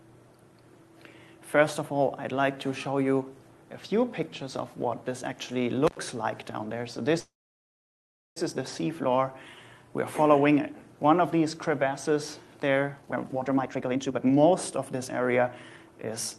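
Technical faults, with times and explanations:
5.87 to 5.97 s, intermittent contact: the sound drops out for about 88 ms with crackle at both edges. A loose plug or cable briefly opened the signal line, then made contact again.
7.19 to 8.38 s, call audio freeze: the last sound trails into a fading buzz or hiss, then about 1.06 s of silence before the audio resumes exactly where it left off. The likely cause is delayed packets emptying the jitter buffer, which inserted a 1.17 s gap rather than losing anything.
13.01 to 16.38 s, jitter buffer speed-up: the audio runs hurried, about 132% of normal speed, while pitch stays the same. After the freeze the receiver held surplus delay and trimmed it by repeatedly cutting tiny pitch-period pieces, roughly a second in total.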